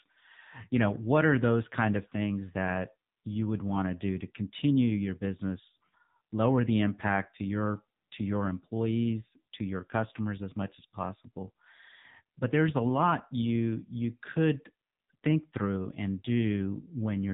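From start to finish the speech sounds thin, boxed-in and buzzy, with a synthetic, robotic edge on every syllable and no air or sibilant brightness at all. This is the AMR narrowband mobile codec at work. The signal has been squeezed into an 8 kHz-sampled telephone band, so nothing above 4 kHz survives. The voice is rebuilt from a vocal-tract model fed by a sparse pulse pattern in 20 ms frames. The heavy buzz points to one of AMR-NB's low modes, around 6.7 kbps.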